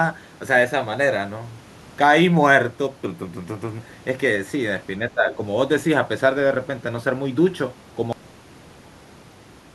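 From 5.09 to 5.38 s, an echo canceller likely mistook the talker for loudspeaker echo during double talk, causing speech suppressed in double talk that dips about 15 dB.

At 8.13 s the final buffers were never written, leaving a cut-off end: the speech stops mid-sound and falls straight to digital silence without decay.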